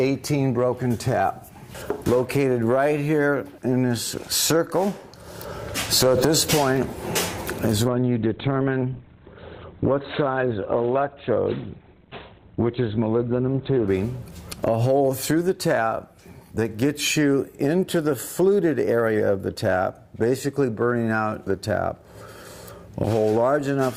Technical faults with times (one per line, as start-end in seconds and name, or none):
7.88-13.88 adaptive stream at a lower bitrate